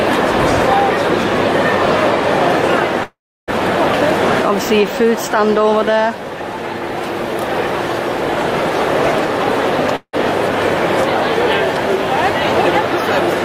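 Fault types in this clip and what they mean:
Call audio freeze: the sound stalls at 3.03 s for about 0.44 s, the last bit stretched into a fading buzz or hiss that drops to silence, then again at 9.96 s for about 0.17 s, and each time it carries on from where it stopped with nothing lost, likely packets held up emptying the jitter buffer.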